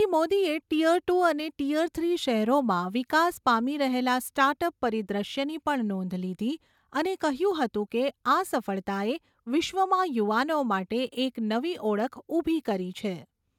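Nothing stood out as a technical problem anywhere in the recording on listening.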